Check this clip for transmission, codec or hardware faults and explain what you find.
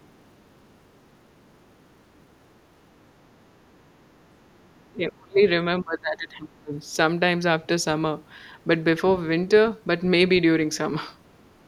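Two stretches of the speech are suppressed in double talk, from 4.47 to 5.41 s and from 5.8 to 6.75 s. Each lasts about a second. The voice sinks sharply, by about 30 dB in the first stretch and about 25 dB in the second. The likely cause is an echo canceller that heard both ends talking at once. It could not tell this talker from loudspeaker echo, so it turned everything down.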